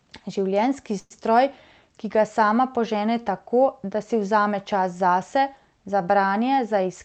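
Speech clip with a call audio freeze from 0.99 to 1.13 s, likely from delayed packets draining the jitter buffer: about 111 ms of fading buzz or hiss, ending in 30 ms of silence, appears as a smeared, decaying band before a flat gap. After "vzame čas zase za", a jitter buffer speed-up from 6.51 to 7.01 s plays the speech at 114% speed and the same pitch, trimming about 70 ms, with a visibly compressed waveform and no spectral pitch shift.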